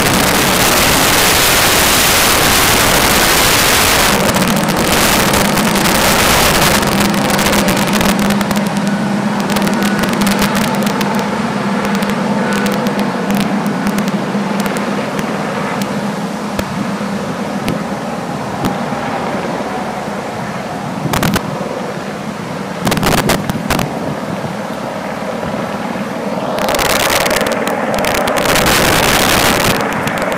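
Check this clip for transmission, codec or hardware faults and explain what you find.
Integer overflow runs through the whole clip. The signal is driven about 17 dB past full scale. Around one sample in twenty wraps to the opposite sign, causing violent cracks on loud passages.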